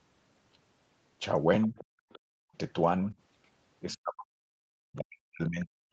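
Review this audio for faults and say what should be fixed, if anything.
A faint second voice can be heard behind the talker at 1.62–1.85 s, 2.10–2.19 s and 3.92–3.97 s. It sits about 25 to 30 dB below the speech. This is the other side's voice leaking through. Loudspeaker playback likely reached the microphone and the echo canceller left a residue. Better acoustic coupling control, a longer echo-canceller filter or headset use would prevent it.

The talker's level drops sharply at 1.69–1.78 s, by roughly 15 dB. At 2.29–2.53 s it falls much further, about 40 dB, so the speech nearly vanishes. From 3.91 s to the end it is pushed down, by as much as about 40 dB. This is speech suppressed in double talk. The canceller likely could not tell near speech from echo and turned both down. A full-duplex echo canceller with gentler residual suppression during double talk would prevent it.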